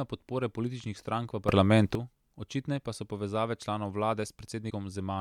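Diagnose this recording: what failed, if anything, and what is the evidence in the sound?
At 1.49 s the speech and its background noise jump together by about 12 dB, from one sample to the next, and hold that raised level until 1.95 s, when they drop back. Because the noise floor moves in lockstep with the speech, the change happened after capture, in the digital path rather than at the microphone. The likely cause is a sudden gain jump, a digital gain setting or bit shift applied without any ramp and later reversed the same way.

A second, separate failure sits at the codec or storage stage. From 4.66 s to 4.72 s, roughly 50 ms, the speech gives way to a brief blip. That points to damaged data in a compressed stream: some of the bytes for those frames were corrupted, so the decoder could not interpret them correctly and had to resynchronise on a later frame header. The short disturbance comes from the decoder losing sync.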